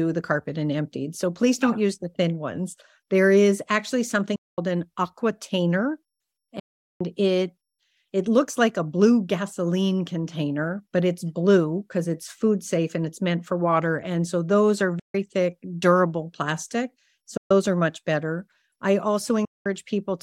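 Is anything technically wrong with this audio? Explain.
Yes. The speech cuts to silence five times: 4.36 to 4.58 s, 6.59 to 7.01 s, 14.99 to 15.15 s, 17.37 to 17.51 s, and 19.45 to 19.66 s. Each gap has sharp edges, and speech resumes as though it had kept playing. This is likely a Bluetooth dropout, where late audio packets were discarded.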